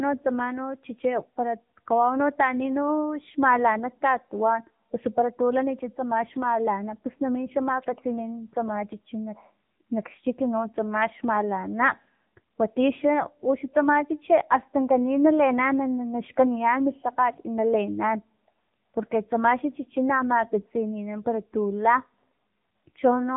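AMR narrowband mobile codec damage runs throughout this speech clip, plainly audible: nothing above 3.8 kHz survives, and the vocal-tract model, rebuilt from a few pulses per 5 ms subframe, gives a buzzy, synthetic edge that fits the 7.95 kbps mode.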